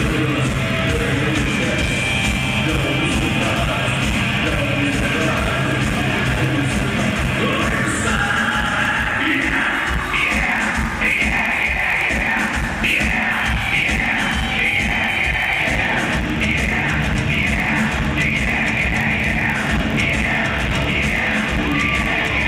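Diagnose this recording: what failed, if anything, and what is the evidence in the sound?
The buffer stage is at fault: a block size mismatch, padded. A steady buzz at about 46.9 Hz runs through the whole recording, which fits a 1024-sample read at 48 kHz. Each block arrives a touch short, so zeros fill the gap, and playback slows to 0.999x at normal pitch.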